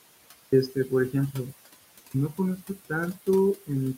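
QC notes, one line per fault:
throughout: noise suppressor artifacts. The suppressor treats the steady background as noise and pulls those bands down by about 19 dB, deciding frame by frame. The room noise, which sits about 15 dB under the speech, sinks in the gaps and swells back up beneath each phrase.
0.47 s and 2.08 s: clipped start after a pause. After 0.47 s of silence at the top, and again after a 0.56 s pause, the output path has gone idle and has to wake or relock before it passes audio. About 55 ms is lost at 0.47 s and about 63 ms at 2.08 s. Both phrases burst in abruptly with their opening sounds missing, instead of building up naturally out of the quiet.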